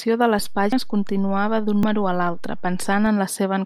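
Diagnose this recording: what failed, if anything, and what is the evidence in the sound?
A DC step at the converter. The zero line jumps at 0.39 s and returns at 3.07 s. Each shift is a low thump.

Compressed frames skipped, a codec or storage fault. At 0.72 s and 1.83 s the speech jumps ahead roughly 150 ms. This fits about two lost 85.3 ms frames.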